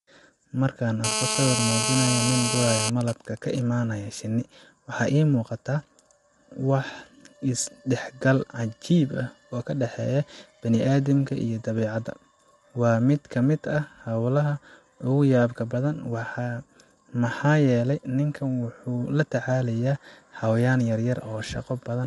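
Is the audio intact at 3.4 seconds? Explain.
No. From 2.89 to 3.62 s a pattern of even ticks with a longer buzz twice a second, at about 217 Hz, sits about 10 dB below the speech. These are GSM signalling bursts. A 2G phone nearby, in a call while its user stays silent, transmits only sparse groups of radio bursts. The audio circuitry rectifies that radio energy, so each group becomes an audible tick-and-buzz at the 217 Hz burst rate.

The speech at that moment is also rough and grainy, with noise filling the gaps between pitch harmonics and nothing above 11.6 kHz. This is low-delay AAC compression, likely AAC-ELD at a bitrate that sounds close to 32 kbps. Its short frames separate harmonics poorly, and at that rate too few bits remain to code the voice cleanly. The damage is plainly audible here, as it is across the whole clip.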